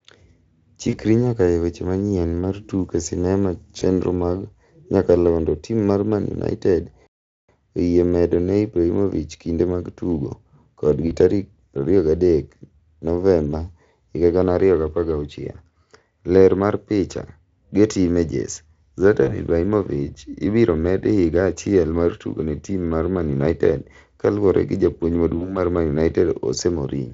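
Speech clip carried over a Speex-coded VoIP link, with the codec's own colouring faint, that shows two kinds of fault. VoIP packet loss concealed by the speech codec occurs at 0.89–0.99 s, 3.79–3.83 s, 11.07–11.13 s, 19.23–19.39 s and 25.37–25.59 s. Each time roughly 20–40 ms of audio goes missing, which fits one or two lost 20 ms frames. The decoder fills the gap by repeating its last pitch and spectral shape at falling gain, so the voice turns briefly buzzy or noisy and fades. Because each frame is predicted from the one before, it stays thin or rough until the end of each span, after the lost stretch. On a spectrogram these appear as smeared, overly regular harmonic bands losing energy, and the waveform shows repeated pitch cycles shrinking in amplitude. A playback stall runs from 7.07 to 7.49 s. The audio cuts out mid-flow for about 0.42 s of silence and then resumes, likely because the player ran short of data or its thread was blocked. 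It shows as a flat-line gap in the waveform and a blank vertical strip across every frequency on a spectrogram, with hard edges on both sides.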